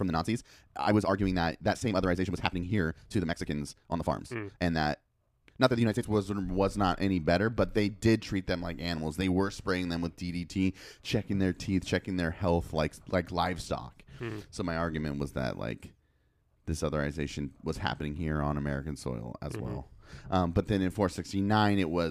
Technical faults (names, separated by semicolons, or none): time-stretched section